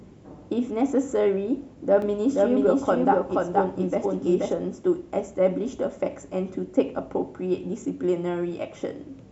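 A second copy of the signal is getting into the mix between 2.02 s and 4.54 s, likely because the same speech is captured again through a slower path or held twice by an edit. The result is a doubled audio track: a full-band duplicate trails the original by about half a second at roughly the same level. It has no reverberant tail or room colour, and it cuts in and out abruptly at both ends.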